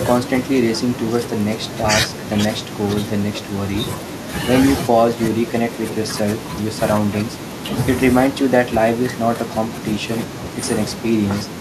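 Listening through this speech recording, nothing stood out as a technical problem at any point.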